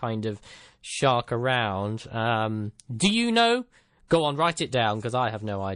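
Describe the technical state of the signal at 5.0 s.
At 5.0 s the speech carries the same plainly audible MP3 compression damage heard across the whole clip. Starved of bits, the encoder has likely shaved off the treble and dropped quiet spectral lines that blink on and off between frames, which fits a low rate near 40 kbps. The result is a watery, swirling texture with chirpy s sounds and blurred onsets. A plain low-pass filter would dull the sound without that frame-to-frame warble.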